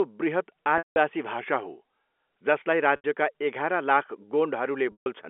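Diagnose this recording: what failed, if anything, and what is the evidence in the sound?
Packet loss with pitch repetition at the network stage: gaps at 0.78–0.96 s (180 ms), 2.96–3.04 s (80 ms) and 4.92–5.06 s (140 ms), which fits lost 20 ms packets. The receiver repeats the last pitch period, giving a held, buzzy tone that fades, unlike the clean silence or clicks of a buffer dropout.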